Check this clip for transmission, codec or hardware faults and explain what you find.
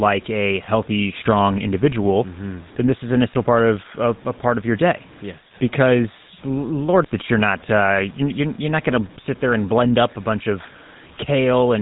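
Two faults run through the whole speech clip: coarse quantisation and GSM full-rate coding.

Low bit depth without dither: the grain is likely from the signal being truncated to very few bits, which fits about a 7-bit word, with no dither to decorrelate the rounding error. That error sits roughly 30 dB below the speech and tracks it, so quiet syllables and decays turn gritty and fizzy, and the faintest passages break up into a stepped sputter rather than fading smoothly.

GSM full-rate codec: the speech has passed through the original GSM codec, at a rate that fits 13 kbps. It models the vocal tract and rebuilds the excitation from a sparse, regularly spaced pulse train, so the voice acquires a buzzy, gravelly roughness throughout. The codec's band limit removes everything above 3.8 kHz, leaving the sound dull and narrow, with sibilants blunted. The coding damage is plainly audible for the full length.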